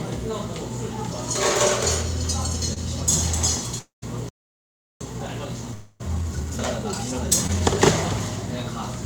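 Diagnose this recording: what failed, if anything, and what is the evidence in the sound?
Short concealed packet loss at the network and decoder stage: brief smears at 2.73–2.79 s and 7.47–7.50 s. About 20 ms of audio failed to arrive each time, and the decoder extrapolated the preceding sound across the gap before cross-fading back.

Long network dropout, likely a network outage: at 3.79–4.04 s about 240 ms is missing, and the concealed tail fades into roughly 150 ms of silence. At 5.74–6.02 s about 260 ms is lost, almost entirely covered by a decaying synthetic continuation.

Playback stall: the output goes silent from 4.29 s to 5.01 s, a gap of about 0.72 s, before sound resumes. This points to the player starving for data or its audio thread being blocked, likely a buffer underrun at the playback stage.

Time-compressed catch-up in the playback buffer: from 5.01 s to 7.87 s the audio runs hurried at about 1.25 times normal speed with unchanged pitch. 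The player drains its backlog by excising and cross-fading short segments.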